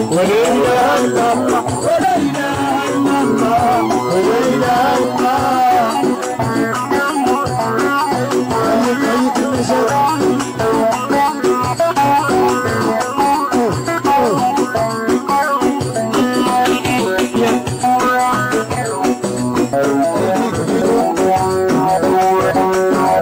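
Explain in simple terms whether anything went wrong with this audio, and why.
At 19.73 s, compressed frames skipped: a few chunks never played, so the sound jumps about a third of a second ahead.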